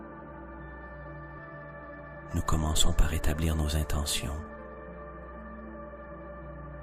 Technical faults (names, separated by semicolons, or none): damaged data in a compressed stream